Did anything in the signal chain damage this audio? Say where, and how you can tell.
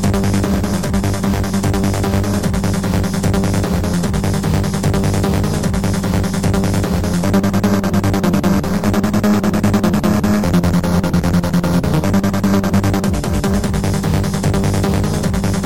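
No, no fault in the chain.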